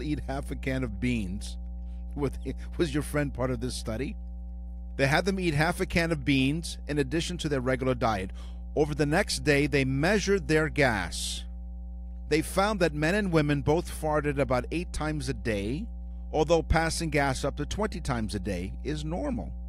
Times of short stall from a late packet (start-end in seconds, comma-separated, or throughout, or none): none